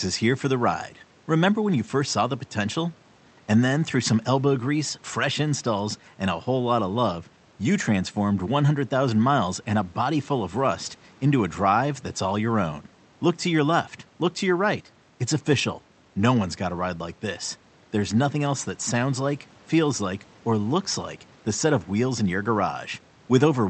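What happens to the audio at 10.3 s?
Nothing goes wrong at 10.3 s: the speech carries on intact there, with only the room's own background noise sitting about 33 dB below it, as it does in the recording itself.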